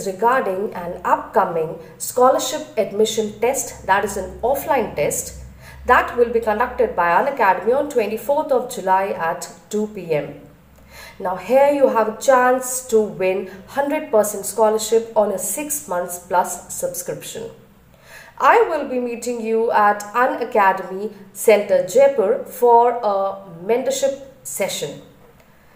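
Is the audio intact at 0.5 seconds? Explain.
No. At 0.50 s the stream is likely missing a handful of samples, a gap of only a fraction of a millisecond, so the waveform leaps straight from one value to a later one instead of moving smoothly between them. That is the signature of dropped samples. The gap is far too brief to remove any audible sound, but the abrupt step produces a single sharp click, which shows up as a thin vertical line across the whole spectrum.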